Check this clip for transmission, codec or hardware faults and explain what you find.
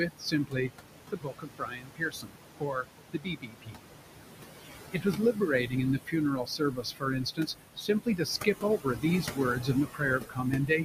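The faults here come from noise suppression: the suppressor works audibly through the whole clip and also removes parts of the speech itself.

Noise suppressor artifacts are present from start to finish. The suppressor estimates the steady background and pulls those frequency bands down by about 21 dB, frame by frame. The room noise, which sits only about 8 dB under the speech, dips away in gaps and comes back under speech.

Speech cut by the noise suppressor occurs in three stretches: 0.00 to 0.70 s, 1.10 to 3.85 s, and 4.62 s to the end. With speech this close to the noise floor, the suppressor mistakes low-level speech energy for noise and attenuates it along with the background, by about 21 to 22 dB at its deepest. Roughly 0.4 s, 2 s and 3 s of speech are affected in those stretches, so quiet consonants and word endings sound swallowed or faint.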